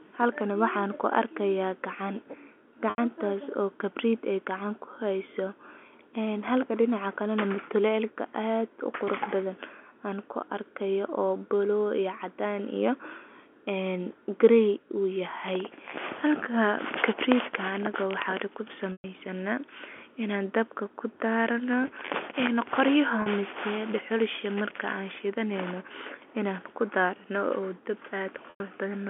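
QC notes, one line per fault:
2.9 s, 18.92 s, 23.22 s, 28.5 s: packet loss with pitch repetition. Gaps of 80, 120, 40 and 100 ms are bridged by looping the last pitch period, fading over about 50 ms. The 40 ms gap sounds like a brief buzzy hold. The longer three decay to silence, then speech cross-fades back.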